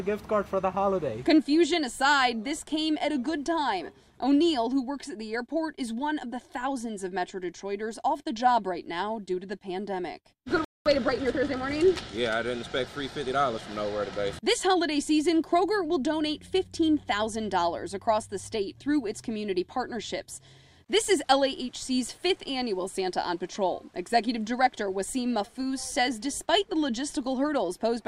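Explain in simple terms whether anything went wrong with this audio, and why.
At 10.65 s the sound suddenly cuts to silence for about 0.21 s, then resumes at 10.86 s. This is a playback stall. The player most likely ran short of incoming data, or was briefly held up, and had nothing to send out until it recovered.

From 10.86 s to 11.70 s the audio sounds hurried, about 1.25 times normal speed, with the pitch unchanged. This is time-compressed catch-up, where the player trims and blends tiny pieces to make up the lost time.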